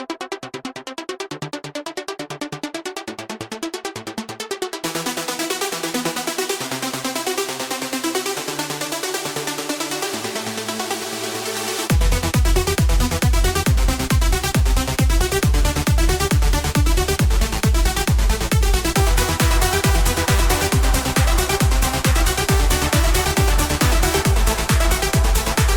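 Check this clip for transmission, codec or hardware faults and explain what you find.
Nothing wrong can be heard anywhere in this recording.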